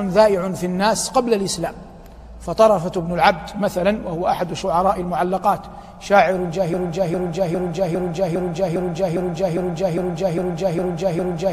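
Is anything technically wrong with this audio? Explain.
Yes. From 6.74 s to the end there's a broken-record loop: a 405 ms fragment repeats exactly, back to back, twelve times. The player or stream likely stalled and kept resending its last chunk, so whatever should have played there is simply gone.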